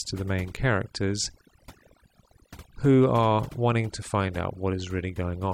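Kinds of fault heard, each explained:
overdone noise removal: noise reduction pushed too hard across the whole speech clip, cutting frequency bands it mistakes for noise. Unlike a plain low-pass or gating fault, the background drops and breaks up into twinkling specks.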